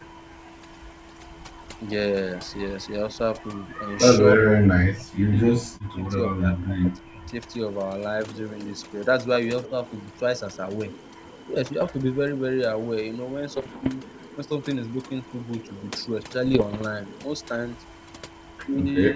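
Overdone noise removal runs through the whole recording. A noise reducer set far too aggressively has cut individual frequency bands whenever they sat close to its noise estimate, so the background collapses into near silence dotted with twinkling specks, and the quieter parts of the speech are shaved off along with it.

From 4.38 to 7.33 s there is speech suppressed in double talk. Spread across about two seconds of that span, the voice sinks in pieces, at its deepest by around 40 dB, which is close to vanishing. This is likely an echo canceller that could not tell the near talker from loudspeaker echo while both sides were active, and so turned everything down.

At 9.64 to 9.68 s a brief echo leak appears: a scrap of the voice returns about 294 ms late, very faint at around 35 dB below the speech. A loudspeaker echo canceller likely let part of its microphone pickup through. Overlapping it, from 9.66 to 9.75 s, the speech dips again by about 10 dB for roughly a tenth of a second, the same double-talk suppression in a milder form.

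Bit errors on an ADPCM link cause rough, popping bursts with momentary level jumps at 11.80 to 11.94 s, 13.57 to 13.90 s and 16.46 to 16.84 s. Each corrupted bit throws off the decoder's step size and predictor, so the damage rings on for a few milliseconds rather than staying a single click. This sits on top of a G.722 link running at 64 kbit/s.

In the last moment, from 19.12 s to the end, the speech is pulled down by about 5 dB for roughly 40 ms, one more short instance of double-talk suppression.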